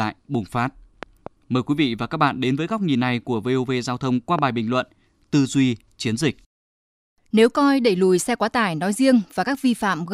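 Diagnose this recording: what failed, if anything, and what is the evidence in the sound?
Loud pops, likely transients in the analogue wiring: a double pop at 1.03–1.29 s after "bùng phát", one at 4.39–4.41 s before "bình luận", about 10 dB over the speech.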